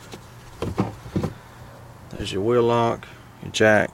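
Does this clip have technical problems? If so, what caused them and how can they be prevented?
Yes. Between 2.14 and 2.22 s there is a brief smeared, noisy patch from lost LE Audio frames. About 45 ms of audio is missing, scattered over 75 ms, which points to around six dropped LC3 frames, the longest run about 30 ms. During each gap the decoder concealed the loss by repeating the last spectrum with randomised phase signs, so tonal content turns to a hissy smear instead of silence. Improving radio link margin and retransmission settings, or reducing 2.4 GHz interference, would prevent it.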